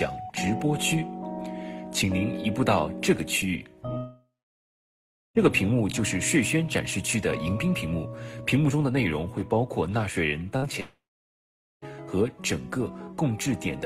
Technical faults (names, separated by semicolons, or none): long network dropout; burst of packet loss